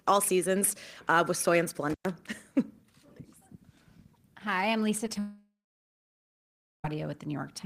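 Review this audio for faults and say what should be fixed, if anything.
Intermittent contact at 1.90 to 2.09 s, just after "uh with soy and": a loose connection opens for about 111 ms, cutting the speech with crackle at each edge. Reseat or replace the cable and connectors.

Short concealed packet loss at 5.06 s and 5.14 to 5.16 s: roughly 10 ms of audio went missing each time, and the receiver patched the gaps by extending the preceding sound, leaving brief smears. A steadier network path with a larger jitter buffer would prevent this.

Long network dropout from 5.19 to 6.85 s: the audio is continued as a fading buzz or hiss, then falls to near silence for about 1.3 s, and the speech resumes with that stretch gone. The likely cause is a network outage, so fix the connection's stability.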